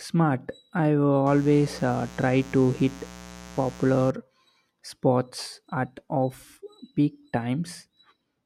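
Speech carries a raspy mains buzz from 1.26 to 4.11 s, sitting roughly 20 dB below the speech. Spiky interference at 60 Hz shows on a spectrogram as evenly spaced horizontal harmonic lines climbing into the kilohertz range, and on the waveform as sharp pulses repeating 120 times per second.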